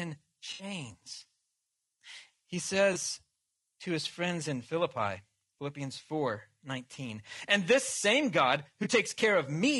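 Low-delay AAC compression runs through the whole speech clip, likely from AAC-ELD at a rate that fits around 32 kbps, whose low bitrate leaves voices grainy with noise between harmonics. AAC frame loss with concealment hits at 0.53–0.63 s, 2.93–2.96 s and 8.83–8.87 s, where the decoder rebuilds missing frames from the last good spectrum and leaves smeared, noisy patches. The first gap, about 60 ms long, fits three lost frames, and the two later ones fit a single frame each.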